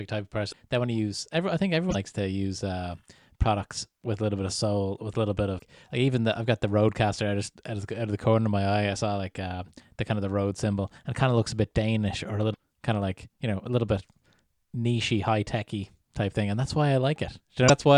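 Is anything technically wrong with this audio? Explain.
Yes. The speech has damaged data in a compressed stream at five points: 0.49–0.54 s (after "type of", before "they want to use"), 1.87–1.95 s (after "I think", before "to use uh products"), 5.58–5.62 s, 12.50–12.56 s (after "or a", before "kind of like you"), and 17.67–17.70 s. Corrupted bytes make the decoder misread those frames and lose sync until the next frame header. Each event is heard as a short chirp or blip, about 26 to 84 ms long, that breaks into the speech.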